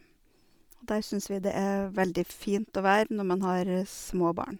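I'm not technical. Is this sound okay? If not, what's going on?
No. Throughout the speech, a grainy, breathy edge points to likely Bluetooth LC3 compression, which discards fine high detail and fills the gaps with noise.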